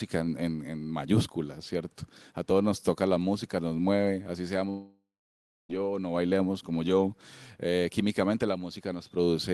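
From 4.69 s to 5.71 s the speech breaks off into a fading buzzy continuation, then about 0.61 s of near-silence, pointing to a likely long network dropout. A spectrogram shows smeared harmonics decaying into an empty band, and the waveform flattens until speech resumes.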